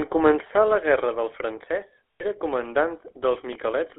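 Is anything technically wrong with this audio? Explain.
Yes, two faults. The GSM full-rate codec runs throughout: the speech is confined to roughly 300 Hz to 3.4 kHz and modelled as a vocal-tract filter driven by coarse pulses, which fits the 13 kbps GSM rate, leaving a plainly audible buzzy, gravelly roughness. Lost GSM frames occur from 2.16 to 2.24 s: for about 80 ms, which points to four dropped frames, the decoder repeats the last good frame's settings, producing a brief rough, metallic ring.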